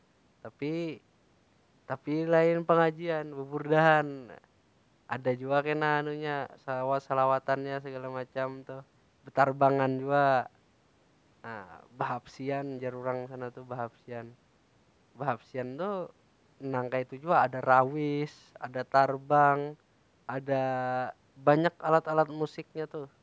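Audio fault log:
The speech has passed through call microphone processing, whose high-pass filter trims the lowest bass and whose band ends at 8 kHz, and the signal shows no faults.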